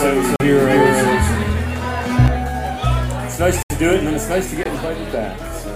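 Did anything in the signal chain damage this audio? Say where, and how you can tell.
Yes. The same audio is likely being captured a second time through a slower path, creating a doubled audio track. From the start to 2.26 s, a full-band copy roughly as loud as the original trails by about 0.3 s, with no room colour, then stops abruptly.

At the driver or buffer stage, the output was likely not filled in time, leaving a block of digital silence three times: 40 ms at 0.36 s, 74 ms at 3.63 s and 20 ms at 4.63 s. Each cuts out and back with no fade.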